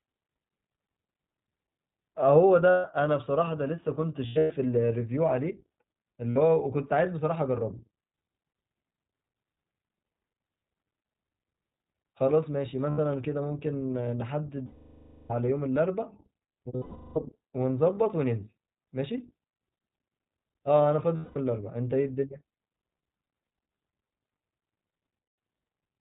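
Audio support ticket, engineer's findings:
Narrowband, slightly rough and synthetic speech throughout, nothing above 4 kHz. iLBC codec: each 20 ms frame's excitation coded independently, consistent with the 15.2 kbps mode. The coding damage is plainly audible across the whole clip.

Held, buzzy or breathy vowel-like fills at 2.70–2.85 s, 4.26–4.52 s (scattered, longest run about a tenth of a second), 6.31–6.38 s, 12.90–13.00 s, 14.66–15.32 s, 16.76–17.18 s, 21.16–21.37 s and 25.22–25.38 s. Lost iLBC frames: the decoder repeats the last pitch cycle mixed with noise, and the fill fades on the 0.64 s and 0.4 s gaps. The voice is right again almost at once after each one.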